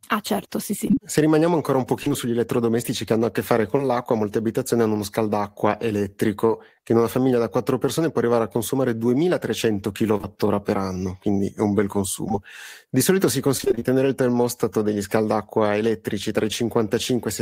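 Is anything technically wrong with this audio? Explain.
Yes, there are three kinds of network dropout in this speech clip.

From 0.87 to 3.81 s there are scattered short gaps, about five of them, each no longer than roughly 30 ms. The receiver papers over each one by extending the last sound, so you get ticks or hiccups.

At 10.18 to 10.21 s and again at 10.21 to 10.25 s you get short concealed packet loss: about 20 ms missing each time, bridged by continuing the prior sound. It comes across as a quick smear.

From 12.29 to 13.95 s there's repeated packet loss, which gives a robotic sound. Eleven gaps, up to 22 ms each, hit in quick succession, with about 10% of that stretch patched, so it turns choppy.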